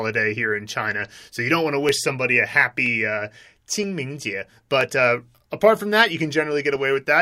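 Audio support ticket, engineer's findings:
Clock drift buffer slips, 0.91–6.76 s, starting just after "here in": regular clicks in the speech about every 0.98 s, around seven in all. Likely two independent clocks a few hundred ppm apart, so the buffer drops or repeats a small block of samples at each slip.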